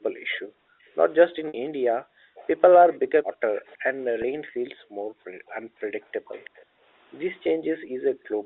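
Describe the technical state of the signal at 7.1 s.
The room sound behind the speech keeps dipping away, by as much as about 40 dB, across 0.41 s to the end: background gated by the echo canceller, which ducks the microphone whenever the loudspeaker plays. Between 6.24 s and 7.84 s the speech itself drops out in brief fragments, around a fifth of a second in all and up to some 40 dB down, likely speech suppressed in double talk as the canceller confuses the local talker with echo.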